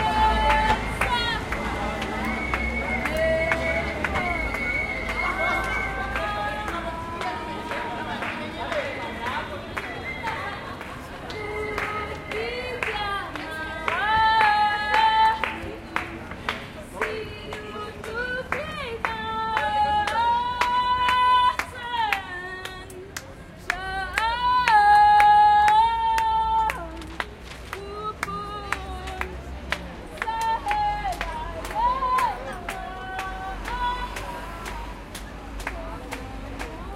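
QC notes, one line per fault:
No faults heard.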